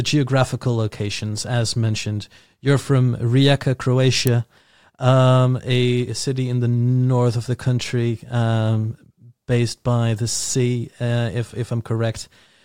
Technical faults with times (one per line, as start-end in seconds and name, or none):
4.27 uninitialised buffer